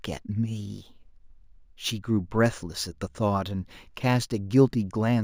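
Throughout the speech there is imaging from linear upsampling: the rate was raised by straight-line interpolation, which fits a 16 kHz source taken to 48 kHz. That dulls the top band and leaves a mirrored image from 8 to 16 kHz, roughly 30 dB down, giving sibilants a faint metallic shimmer.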